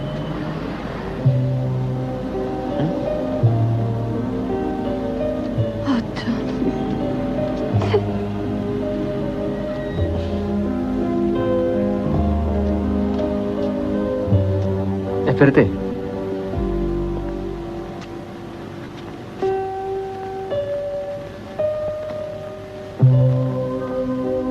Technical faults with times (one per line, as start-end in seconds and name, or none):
14.81-15.00 repeated packet loss (robotic sound)
15.48-16.37 scattered short gaps